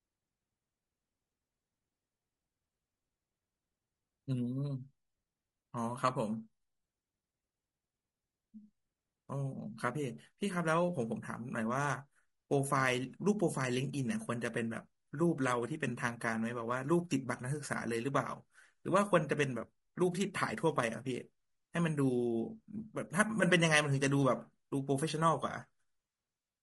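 Speech clip, compressed throughout by what is likely low-delay AAC compression of the AAC-ELD kind used for video calls, at a rate that fits roughly 32 kbps. At this low bitrate, too few bits are spread over the roughly 500 frequency lines it codes each frame, so the voice comes out rough and grainy, with noise filling the gaps between harmonics and a top band that sounds dulled and partly synthetic. The damage is plainly audible from start to finish.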